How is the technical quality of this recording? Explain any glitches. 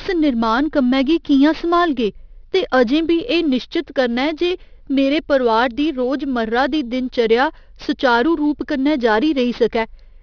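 The recording has a clear technical fault: aliasing runs through the entire clip. The speech was resampled down without proper low-pass filtering first, and the band tops out at 5.5 kHz, which fits a rate of around 11 kHz converted from a 48 kHz original. Content above that fold point reflects back below 5.5 kHz at unrelated frequencies, some 25 dB under the speech. As a result, sibilants sound gritty and metallic, and the spectrum runs hard up to the band edge.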